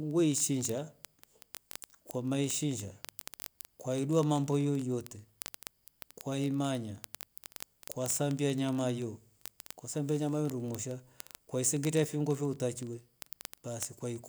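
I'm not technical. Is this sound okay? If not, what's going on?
No. From 0.11 s right to the end, near 14.28 s, the speech is peppered with word clock ticks. These are sharp clicks, about fifty every second, so there are hundreds in all. They happen when two digital devices pass audio between them but keep time separately. Their clocks disagree slightly, roughly one part in a thousand. Each time they slip, a single sample seems to be dropped or repeated, and you hear a tick.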